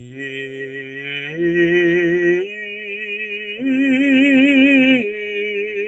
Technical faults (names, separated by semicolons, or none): noise suppressor applied to music or sounds; sound cut by the noise suppressor